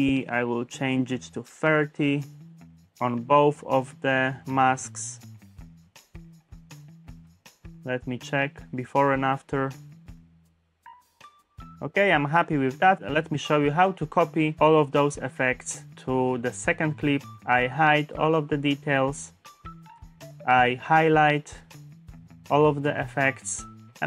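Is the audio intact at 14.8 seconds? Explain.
Yes, the audio at 14.8 seconds is intact, with no audible dropout, click, distortion or other fault at that moment.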